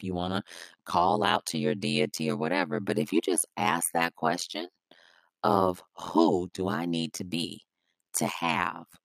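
Throughout the speech there is overlap-add ripple. The audio was split into windowed frames and rebuilt with an overlap whose windows do not add up to a steady gain, so the level swings once per frame. The swing here is deep, about 60 dB, and repeats at around 100 Hz. That imposes a harsh, metallic buzz on every syllable.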